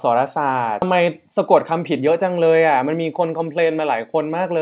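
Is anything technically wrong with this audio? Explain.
Yes, two things stand out.

Skip ahead, 0.82 to 0.84 s: about a second of audio just vanishes. The receiver threw away a chunk while newer audio was already queued, so playback jumps forward and the two sides butt together with basically no gap.

Jitter buffer speed-up, 0.92 to 3.66 s: after that jump the buffer was still holding more audio than it wants, so it kept snipping out tiny pitch-period slices, roughly a third of a second in total. Speech runs at about 110% speed with the same pitch and sounds a bit rushed.

The audio also has nothing above 4 kHz, which fits a G.711 mu-law call path.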